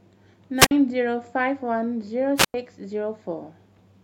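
The radio link of an analogue FM wireless microphone fades twice in this speech recording, and each time the signal falls far enough that the receiver's squelch cuts the output. That produces two wireless microphone squelch dropouts: from 0.58 to 0.71 s, a rise of hiss gives way to a muted gap of about 48 ms; from 2.36 to 2.54 s, the same pattern returns with a longer hole of about 98 ms before the voice comes back.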